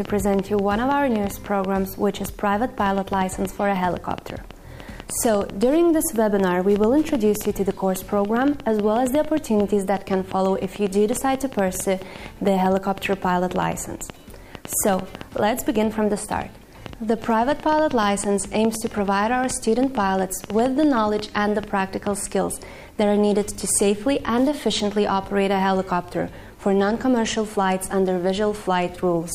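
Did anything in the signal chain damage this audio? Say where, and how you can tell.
Yes: an irregular train of clicks ticks from 0.05 to 22.08 s, about 5.7 per second, likely interference pickup in the analogue wiring or interface.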